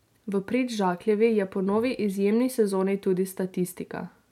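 Nothing stood out on listening to the speech in this recording.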